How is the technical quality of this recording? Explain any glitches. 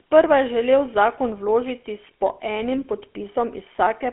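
Technical quality is poor throughout: the whole clip carries GSM full-rate codec damage. A speech model is driven by regularly spaced pulses, which fits about 13 kbps, leaving a buzzy, gravelly roughness on the voice. Nothing survives above 3.8 kHz, and the band sits near 250 Hz to 3.4 kHz. Plain telephone band-limiting would sound muffled but smooth, whereas this codec adds the grit.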